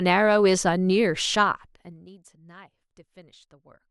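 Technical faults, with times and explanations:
1.32–2.11 s, zipper noise: a rapid ticking buzz rides on the speech while its level falls by roughly 25 dB. The gain drops in unsmoothed 1 dB steps, about fifty per second, and each abrupt jump puts a small click into the waveform.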